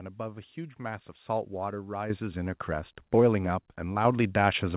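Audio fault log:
2.10 s and 4.05 s, microphone volume stepped up: The speech jumps louder in a single step, by about 8 dB at the first point and about 5 dB at the second. The background rises with it at the same instant. That shows the device's input gain was raised, not the talker speaking up. The call software judged the microphone too quiet and turned it up. The narrowband sound of the call path, with nothing above 4 kHz, stays the same across both steps.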